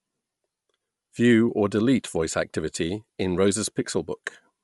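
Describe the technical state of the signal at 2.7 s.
At 2.7 s the speech has a breathy, grainy edge and nothing above 11.6 kHz, as across the whole clip. The likely cause is Bluetooth LC3 compression: 10 ms transform frames thin out and noise-fill the upper spectrum, consistent with about 48 kbps.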